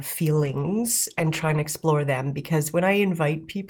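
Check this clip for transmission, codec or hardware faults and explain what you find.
One fault stands out: a call bitrate drop from 0.35 s to 1.71 s. The connection's bandwidth estimate fell, so the encoder was told to spend far fewer bits, and the sound points to a fall from about 32 kbps to about 13 kbps, holding at that low rate for roughly 1.3 s. The coarser coding makes the speech rough and watery, and the top end is cut away, leaving it muffled. Unlike packet loss, there are no gaps or clicks.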